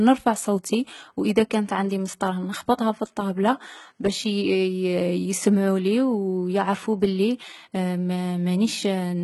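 From start to end, the speech shows heavy damage, likely from HE-AAC compression at a low rate fitting roughly 16 kbps. Replicated treble makes s sounds gritty and metallic. A spectrogram shows copied, smeared upper bands that don't align with the harmonics below, and nothing above 11.8 kHz.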